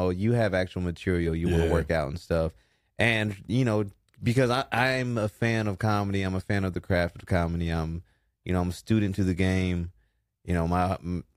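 Nothing goes wrong anywhere in this speech recording, so there's no technical fault to point out.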